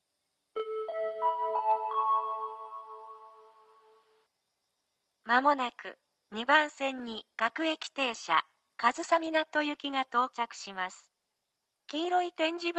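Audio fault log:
6.99–11.82 s, call bitrate drop: the sound turns coarser and rougher, with a watery, smeared quality that holds for nearly 4.8 s before the clip's earlier clarity returns near the end. The call's bandwidth estimate fell and the Opus encoder was told to spend far fewer bits, which fits a fall from 32 kbps to about 18 kbps. With fewer bits, the codec quantises the signal more coarsely, so its coding noise becomes audible.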